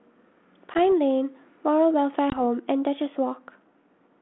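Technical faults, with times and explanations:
0.74–0.78 s and 2.30–2.41 s, packet loss on an ADPCM call: Each event opens with a hard-edged gap of silence, about 10 ms at the first and 20 ms at the second. That points to roughly one and then two lost packets. The receiving decoder's adaptive predictor and step size lose track of the sender's. The speech resumes slightly distorted, then settles within tens of milliseconds. The narrow telephone band of the G.726 line can be heard around both gaps.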